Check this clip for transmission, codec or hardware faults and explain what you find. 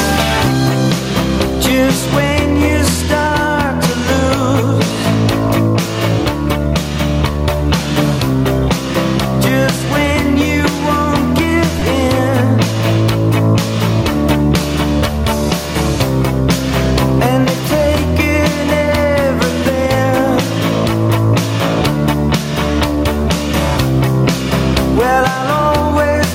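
Two faults stand out: level pumping through the whole clip, and a brief dropout of Bluetooth LE Audio frames just before the 12-second mark.

Gain pumping runs from start to finish. The level swings by around 10 dB, ducking whenever something loud arrives, so everything sounds squashed. The likely cause is input gain cranked far too high, with a fast limiter or compressor clamping down on every peak.

Lost LE Audio frames show up from 11.79 to 11.82 s. About 22.5 ms of audio went missing, which fits three dropped LC3 frames. The decoder covered the hole by replaying the last spectrum with scrambled phase, so any tonal content briefly turns into a short, grainy noise smear.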